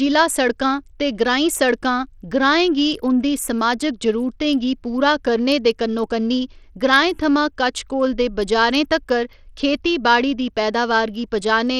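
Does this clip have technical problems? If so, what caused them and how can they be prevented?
Yes. Throughout the speech the treble flickers and drops out while a gritty grain rides on everything, likely from Bluetooth SBC compression at a bitrate around 80 kbps. Too few bits leave the top sub-bands starved and coarsely quantised. Unlike MP3 damage, there is no swirling, watery smear. Using a wired connection or a higher-quality Bluetooth codec with a larger bit pool prevents it.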